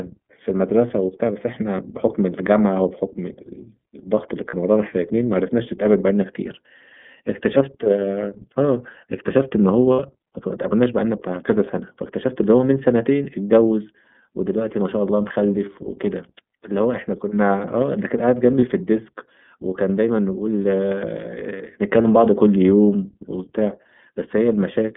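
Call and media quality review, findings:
iLBC codec, whole clip: narrowband speech, band roughly 150 Hz to 3.5 kHz, nothing above. Plainly audible rough, synthetic edge from frame-independent excitation coding, consistent with iLBC's 30 ms, 13.33 kbps mode.

Lost iLBC frames at 4.50 s (30 ms), 9.93 s (60 ms), 18.59 s (30 ms), 22.02 s (30 ms): brief held, buzzy vowel-like fill where the decoder repeats the last pitch cycle with noise. Gaps fit one or two dropped packets. Clean recovery immediately after each, as iLBC frames decode independently.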